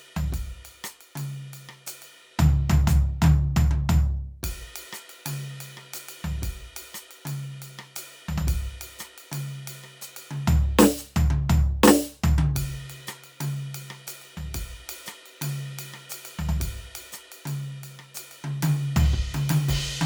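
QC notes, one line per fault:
No faults found in this music.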